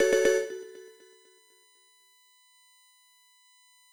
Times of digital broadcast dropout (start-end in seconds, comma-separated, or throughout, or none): none